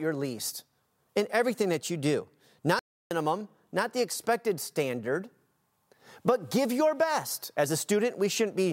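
Right after "everything that you do", at 2.79 s the speech cuts to silence mid-flow and resumes at 3.11 s, a gap of about 0.32 s. This is a playback stall, likely caused by the player running out of buffered data or its thread being blocked.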